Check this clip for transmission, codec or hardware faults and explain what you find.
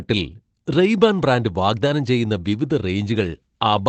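Two brief faults, both a lost packet rebuilt from error correction, in audio carried over a WebRTC call path whose Opus coding limits the sound to about 8 kHz, which fits a 24 kbps wideband setting. The first is at 0.31 s, lasting 20 ms, just before "റെയ്ബാൻ ബ്രാൻഡ് വാഗ്ദാനം ചെയ്യുന്ന". The second is at 2.49 s, also 20 ms, right after "റെയ്ബാൻ ബ്രാൻഡ് വാഗ്ദാനം ചെയ്യുന്ന". Each time one packet went missing, and the following packet carried a low-bitrate copy that the decoder played instead. The result is a short patch of rougher, noisier texture rather than a gap. Ordinary concealment would sound different: it guesses from earlier audio and gives a smeared, buzzy or faded stretch. Here the copy holds the real content, only coarser.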